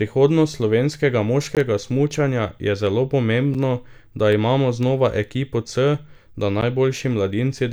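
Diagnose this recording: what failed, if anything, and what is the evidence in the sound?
Three blocks of digital silence punch through the speech: about 17 ms at 1.55 s, 5.8 ms at 3.54 s and 11.6 ms at 6.61 s. The stage is the driver or buffer. Each gap cuts to silence and back with no fade, heard as ticks or tiny holes. The 5.8 ms and 11.6 ms gaps fit 256- and 512-sample buffers left unfilled. Network loss would usually be concealed rather than left as hard silence.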